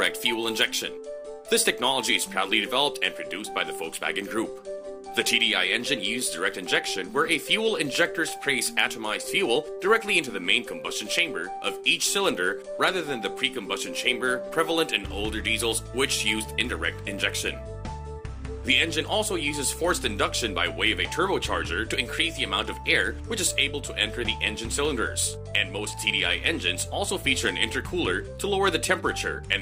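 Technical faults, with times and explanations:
No technical faults are audible anywhere in the recording.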